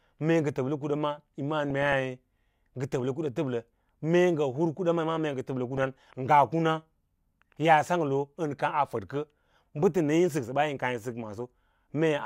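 At 1.70 s the speech breaks into DAB burbling until 1.93 s. It returns from 5.70 s to 5.88 s. Both bursts add short blips of noise over the voice. Weak reception lets bit errors slip past error correction into the MP2 data. Corrupted samples put short noise blips in single sub-bands, and corrupted scale factors make sub-bands jump in level for up to a frame. The first burst points to about a dozen damaged frames. The error rate stays well under one percent.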